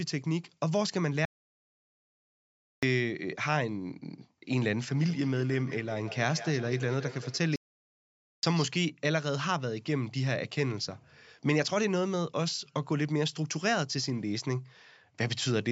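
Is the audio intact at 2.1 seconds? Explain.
No. At 2.1 s the speech sits inside a playback stall running from 1.25 to 2.83 s, about 1.57 s of silence. The player likely ran out of data, so the waveform drops to a flat line and the spectrogram goes blank before resuming.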